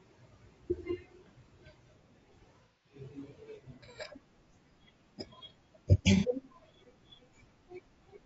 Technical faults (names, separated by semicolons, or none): low-delay AAC compression; AAC frame loss with concealment